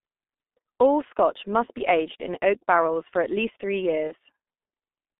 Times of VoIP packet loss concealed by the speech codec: 4.07-4.14

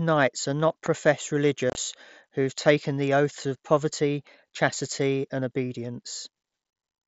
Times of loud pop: 0.86-0.88

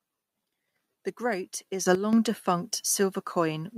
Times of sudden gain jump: 1.86-1.95

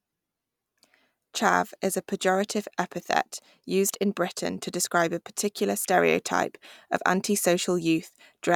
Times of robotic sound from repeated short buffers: none

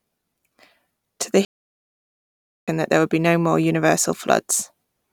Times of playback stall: 1.45-2.68

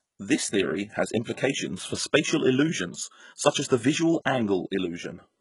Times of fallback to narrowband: none

